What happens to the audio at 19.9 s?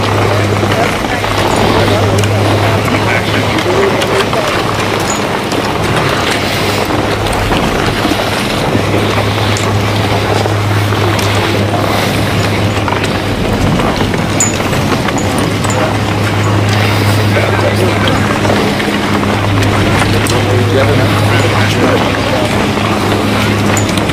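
At 19.9 s the loudest peaks break into a gritty crackle, a harsh edge riding on the sound rather than a clean crest. This is hard clipping, and it runs through the whole clip, not just this moment. The signal is driven about 9 dB beyond what the stage can pass, so its peaks are sliced flat, roughly 2 percent of the audio. Those squared-off tops throw harmonics high into the spectrum, which is the crackle heard here.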